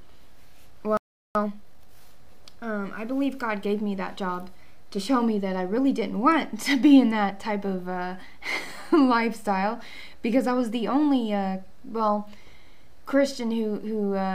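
At 0.97 s the sound cuts out mid-flow. Silence holds until 1.35 s, about 380 ms. This is a playback stall. The likely cause is a player that ran short of incoming data, or whose output thread was held up. Either way, nothing reached the output during the gap. When sound returns at 1.35 s, it picks up again after the break. The gap is long enough to notice clearly.

From 1.35 s to 2.09 s comes a time-compressed catch-up. The player works off the backlog built up during the stall. It drops small pieces of the audio and cross-fades across each cut. The result plays at 1.5 times normal speed. Pitch stays where it was, so the passage sounds hurried rather than higher. By 2.09 s the backlog is cleared and the pace returns to normal.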